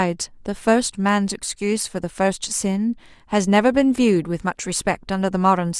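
Nothing faulty is audible anywhere in this speech recording.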